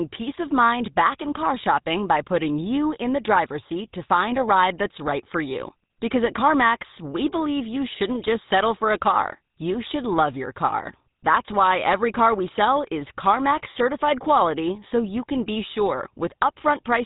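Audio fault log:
Throughout: GSM full-rate codec. Speech turns buzzy and gravelly as pulse-driven vocal-tract coding takes over, with everything above 3.8 kHz gone, unlike plain band-limiting's clean dullness.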